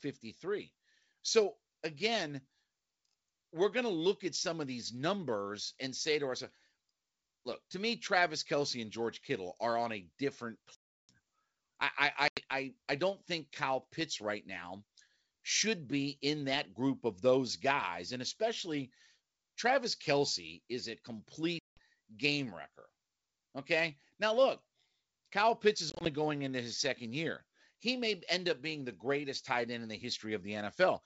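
Packet loss on an ADPCM call strikes four times. Each time, lost packets are replaced by silence, and the decoder's predictor and step size drift out of step with the sender's. At 10.75 s, after "are on a different", 340 ms vanishes. At 12.28 s, 90 ms drops just before "I I don't think". At 21.59 s, 180 ms drops. From 25.90 s, 80 ms goes in short runs of 20 ms at most, spread over 160 ms, just before "going into his second". After each hard-edged hole the speech returns slightly distorted, then settles within some tens of milliseconds.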